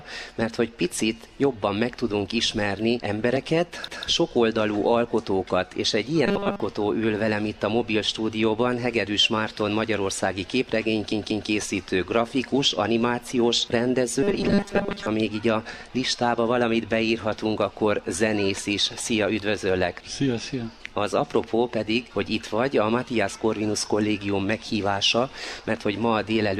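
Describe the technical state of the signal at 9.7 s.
At 9.7 s the signal is intact, with no dropout, distortion, clicks or other technical fault audible at that point.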